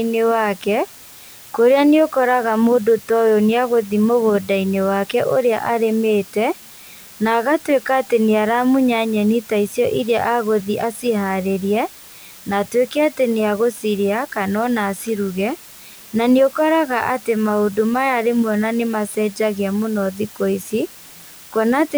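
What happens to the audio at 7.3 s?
At 7.3 s the speech carries a constant, even hiss. This is low bit depth with dither, present throughout the clip. The signal is stored with very few levels, which fits about 6 bits. Dither added before rounding turns the error into steady white noise, roughly 25 dB below the speech, with no distortion.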